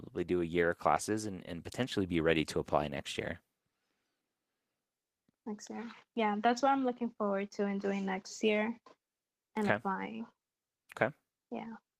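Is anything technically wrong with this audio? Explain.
No, no technical faults present.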